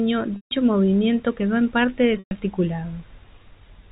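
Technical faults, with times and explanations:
0.36–0.51 s and 2.19–2.31 s, packet loss with pitch repetition: the last pitch period repeats as a brief buzzy hold, fades out over about 50 ms to silence within the 150 ms and 120 ms gaps, then speech cross-fades back, unlike an abrupt dropout.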